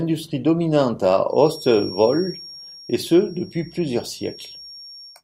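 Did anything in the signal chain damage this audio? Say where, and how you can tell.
Yes, there's a feedback whistle at the acoustic end of things. From 1.26 s to the end, a thin 5.6 kHz tone sits behind the speech, roughly 20 dB down and slowly swelling and fading. That's likely a speaker-to-mic loop hovering right at the edge of feedback.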